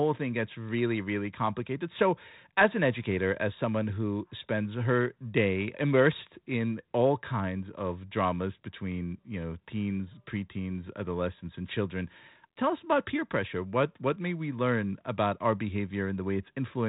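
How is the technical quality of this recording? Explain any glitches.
No glitches are audible in this recording. The speech comes through a G.726 ADPCM telephone path at 32 kbit/s, which leaves only light coding grain and cuts everything above about 3.8 kHz, giving it a narrowband, phone-like tone.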